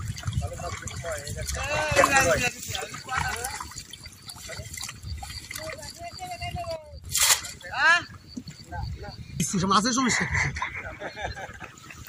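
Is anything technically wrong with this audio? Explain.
Yes, there are two sudden gain jumps. From 1.96 to 2.48 s the level leaps up by about 12 dB, and from 6.76 to 7.04 s it drops by about 10 dB. The sound and its background noise shift together, likely from a digital gain change applied instantly with no ramp.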